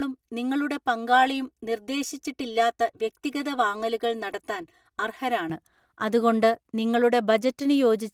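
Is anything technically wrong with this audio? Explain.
Yes. Channel delay (comb filtering) runs from 0.0 to 5.50 s. One channel arrives roughly 3 ms behind the other, and when the two are summed to mono, the shared speech content cancels at evenly spaced frequencies. The first notch falls around 200 Hz, with further fixed notches repeating up the spectrum. The speech sounds hollow and phasey, as if heard through a tube. The light Opus coding, which fits a hybrid-mode voice stream, is not the cause.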